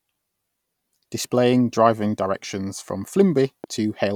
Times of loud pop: 3.64-3.66

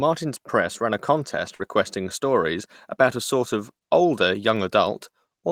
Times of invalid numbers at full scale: none

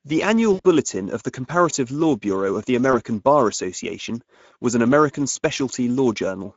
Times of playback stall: none

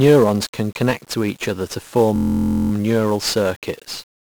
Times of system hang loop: 2.16-2.72

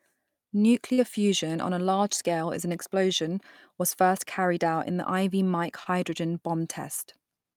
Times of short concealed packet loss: 0.93-0.99, 5.83-5.87

